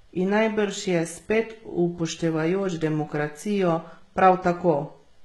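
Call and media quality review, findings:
HE-AAC compression, throughout the speech. Treble bright but synthetic; s sounds gritty, lispy, metallic. Likely HE-AAC spectral band replication: upper band copied up from lower bands under a coarse envelope, harmonics misaligned past the crossover. Heavy damage fits a bitrate around 16 kbps.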